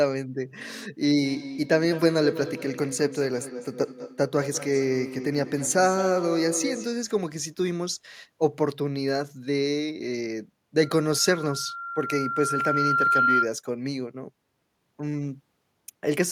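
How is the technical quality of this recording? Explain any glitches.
The recording has two feedback problems.

From 1.15 to 6.97 s there is feedback echo between two devices: a second device in the room replays this microphone's signal, which is picked up again beyond the reach of the echo canceller. The speech returns roughly every 200 ms, thinner and ringing, at most about 10 dB below the direct voice.

From 10.83 to 13.5 s there is a loudspeaker feedback squeal: the microphone hears the loudspeaker it feeds, and at 1.4 kHz the loop gain exceeds one. A pure tone swells over about two seconds into a howl roughly 5 dB above the speech.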